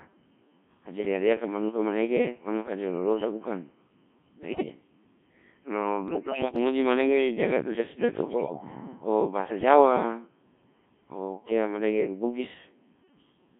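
Throughout, the speech carries the sound of the Codec 2 vocoder. Only pitch, voicing, level and a rough spectral envelope survive. The decoder rebuilds the voice from sine waves. It sounds robotic and buzzy, held within 150 Hz to 3.4 kHz, which fits a 1.3 kbit/s mode.

Bit errors on digital voice radio strike from 4.42 to 4.66 s, 6.08 to 6.58 s, and 8.28 to 8.64 s. Flipped bits corrupt whole frames of vocoder parameters. Pitch, level and tone colour jump. The voice turns into warbles and robotic gibberish. The middle burst is longest and most garbled.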